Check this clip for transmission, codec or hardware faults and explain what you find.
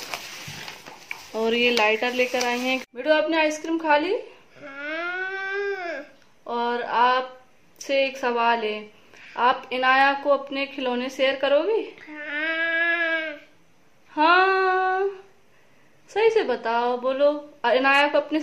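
No faults can be heard.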